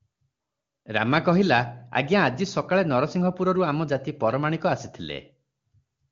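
Speech, with no audible technical faults.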